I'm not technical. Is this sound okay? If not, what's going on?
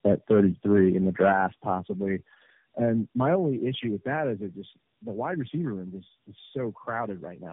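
No. The whole clip shows tandem speech coding: the speech was squeezed by three phone codecs in turn, each roughening it further, leaving it muffled, warbly and cut off above 3.7 kHz.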